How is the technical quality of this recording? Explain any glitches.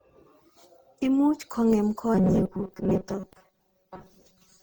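The recording has two clear problems: a degraded, over-processed quality for its whole length, and a mechanical buzz over the second half.

Throughout, the speech shows generation loss, most likely from being run through a lossy codec around ten times, which fits repeated Opus encoding at about 64 kbit/s. Each decode and re-encode quantises the signal again on a shifted frame grid, so the errors pile up. The result is a swirly, hollow, smeared speech sound with softened consonant attacks, worse than a single pass at that rate would give.

From 2.15 s to the end, robotic sound from repeated short buffers takes over, likely because audio was delivered too rarely and playback filled the gaps by looping the last short buffer. Most of the real audio in that stretch is skipped. Repeating a block of about 5.3 ms imposes a fixed 188 Hz tone, so the speech becomes a rigid metallic buzz that only loosely follows the speech underneath.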